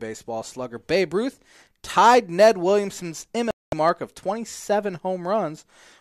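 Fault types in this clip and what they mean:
Digital broadcast dropout: the receiver stopped getting usable frames and muted, so the speech drops to silence from 3.51 to 3.73 s, roughly 0.22 s lost.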